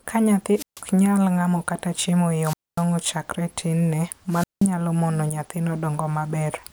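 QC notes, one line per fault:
0.53–0.83 s, 2.40–2.85 s, 4.28–4.70 s: wireless microphone squelch dropout. The analogue FM radio link fades until the receiver's squelch mutes the output, so hiss swells into near-silent holes of 145, 243 and 179 ms before speech resumes at "mono nyathino" after the last.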